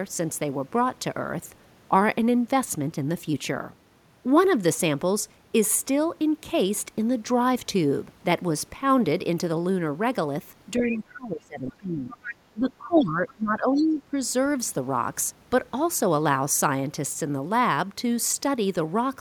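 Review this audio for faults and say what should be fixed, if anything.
Other side's voice leaking through: brief scraps of a second voice appear at 10.77–10.98, 12.12–12.35, 12.96–13.01, 13.28–13.32 and 13.75–13.82 s. They sit well below the main talker, about 10 to 30 dB down. Likely cause: loudspeaker playback reaching the microphone, with the echo canceller leaving residue. Better acoustic isolation or a headset, plus tuned echo cancellation, prevents this.

Speech suppressed in double talk: the talker's level dips from 10.77 to 12.27 s and again from 12.53 to 14.16 s. The deepest dip is around 20 dB. Both sides were talking at once. The echo canceller likely could not separate them and attenuated everything. A canceller with proper double-talk detection, or a headset, prevents this.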